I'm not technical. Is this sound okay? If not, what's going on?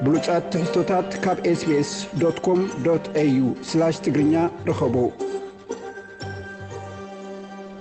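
Yes, nothing here sounds wrong to me.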